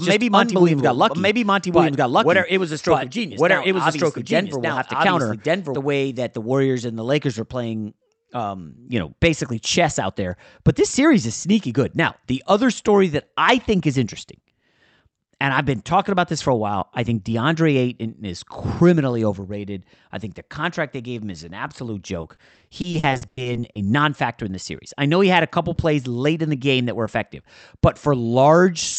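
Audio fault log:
0.0–5.76 s, doubled audio track: the speech is already running twice when the clip opens, with a second full-band copy trailing about a second behind at roughly the same level, so everything you hear gets an echo that carries no room tail or decay. It cuts out abruptly at 5.76 s. That's most likely a second capture taken through a slower route, or an edit that left two copies out of step.
22.21–23.77 s, repeated packet loss (robotic sound): fifteen short dropouts land across this stretch and make the speech choppy. Each hole got patched by stretching the last bit of sound, and about 420 ms in total was filled that way, roughly a quarter of the span. The longest single gap was 100 ms. Bits of the speech are simply missing, and the next gap arrives before the patched sound can settle.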